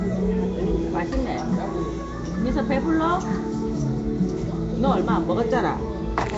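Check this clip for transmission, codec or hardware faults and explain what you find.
One codec fault runs through the whole clip: Nellymoser compression, likely from the Nellymoser Asao codec used for Flash microphone audio. The damage is plainly audible from start to finish. Nothing remains above 7.7 kHz, and the upper range sounds dull and capped. The codec codes short blocks at a fixed, low bit budget. The damage fits roughly 32 kbps. Weak bands lose their bits and are filled with noise. The result is a rough, hissy halo and a smeared, underwater quality.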